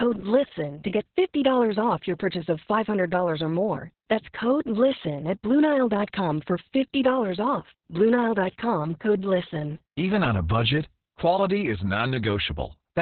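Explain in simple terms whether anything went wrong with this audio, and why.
Something did go wrong. The whole recording, from start to finish, suffers from heavy Opus voice compression. To save space, the speech was squeezed through a voice coder at a very low data rate. The coder kept only sound below about 4 kHz, so the voice sounds muffled, like an old phone line. It also rebuilt the voice roughly, in short 60-millisecond chunks, which makes it hoarse and slightly robotic.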